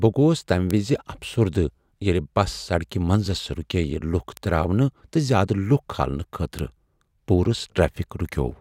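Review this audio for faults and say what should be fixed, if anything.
Three bit error spikes tick through the speech at 0.71 s, 4.37 s (just before "تراونہٕ تہٕ") and 6.59 s. Each is one or two samples jumping by a power of two, peaking near about -2 and -8 dBFS. Fix with error-checked transfer and memory.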